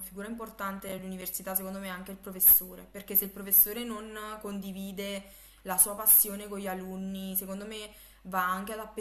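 Speech, with a burst of processor overload crackle from 0.80 to 1.36 s. A handful of tiny silent dropouts, in keeping with audio buffers of around 5 ms missing their deadlines, give it a gritty, hard-edged tearing texture that stops once the load clears. Inside that burst, at 0.98 s, compressed frames are skipped: roughly one frame, fitting a 23.2 ms codec frame, so about 20 ms of speech jumps ahead.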